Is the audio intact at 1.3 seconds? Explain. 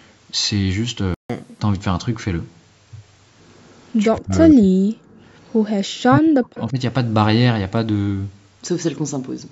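No. A playback stall silences the sound from 1.14 to 1.30 s, about 150 ms. The player likely ran short of data or was blocked. Catch-up at higher speed then follows, from 1.30 to 1.60 s. The player races through its backlog at 1.5 times normal speed. Pitch jumps about seven semitones before settling back.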